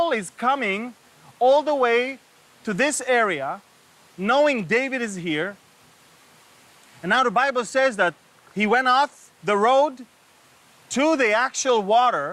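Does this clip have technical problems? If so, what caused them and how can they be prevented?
No, the signal shows no technical faults anywhere in the clip, so nothing needs preventing.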